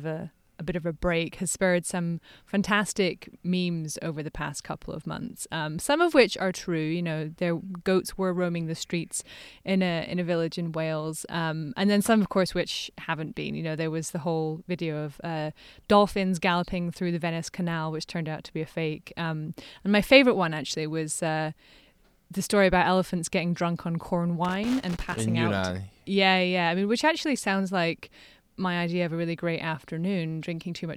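A speech clip with one fault: loose connector crackle from 24.45 to 25.21 s, just after "getting drunk on corn". For about 0.77 s, a worn or dirty contact makes and breaks contact as it shifts, chopping the signal into an irregular burst of crackle.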